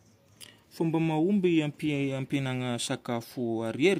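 No technical faults can be heard in the recording.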